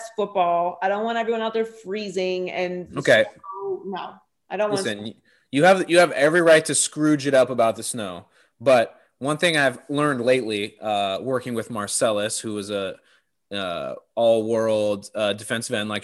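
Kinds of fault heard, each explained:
No technical fault can be heard anywhere in the speech. There is nothing to list under any kind of fault for this recording.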